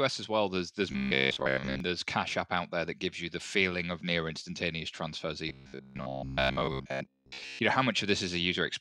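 Robotic sound from repeated short buffers appears from 0.92 to 1.80 s and again from 5.49 to 7.59 s. The speech collapses into a stiff, metallic buzz locked at 66.7 Hz while still loosely tracing the words. This is likely a buffer underrun: with fresh audio arriving too rarely, the same 15 ms slice is replayed over and over, covering most of each stretch, and the real speech underneath is dropped.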